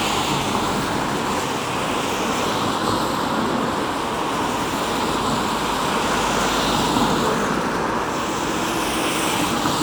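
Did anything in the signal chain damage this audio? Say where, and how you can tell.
No, nothing along the signal chain audibly damaged these sounds, and the signal comes through intact with continuity throughout.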